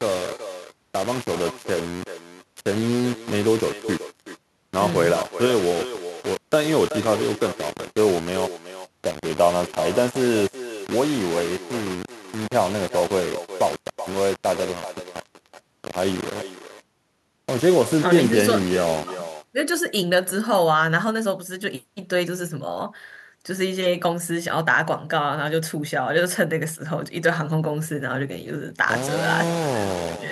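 From start to finish the speech is coated in coarse, grainy distortion that shifts with every syllable, sitting only around 15 dB below the voice. Quiet tails break into sputter or drop out. The likely cause is low bit depth without dither, with samples rounded to something like 4 bits.

Throughout, each phrase is also shadowed by a thinner copy about 12 dB quieter, arriving roughly 0.4 s later. This is echo with no canceller. The far end's loudspeaker feeds its microphone, and nothing removes that return before it travels back.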